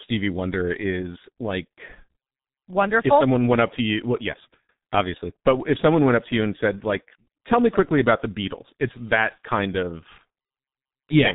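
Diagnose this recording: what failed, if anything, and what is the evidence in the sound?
The speech sounds muffled and hoarse from start to finish, with consonants smeared into each other and no audible content above about 3.8 kHz. The failure is at the codec stage: the G.723.1 codec has encoded the speech with heavy damage. It models the voice in 30 ms frames and refreshes that model slowly, so fast articulation blurs, and the roughness fits a bitrate near 6 kbit/s.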